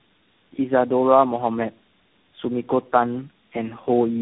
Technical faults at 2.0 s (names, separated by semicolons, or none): tandem speech coding